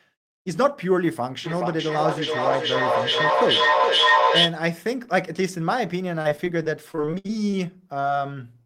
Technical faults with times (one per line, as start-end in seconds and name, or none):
1.44-4.62 feedback echo between two devices
6.21-7.55 repeated packet loss (robotic sound)
8.01-8.05 short concealed packet loss
8.63-8.65 short concealed packet loss